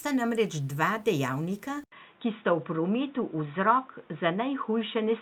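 At 1.84 s, just after "namreč dva dejavnika", an 80 ms gap opens and the speech turns dull, with nothing above 3.8 kHz through to the end. The likely cause is an input switched to a poorer device. Unlike a simple codec bandwidth drop, the switch brings a faint new background noise, while loudness holds steady.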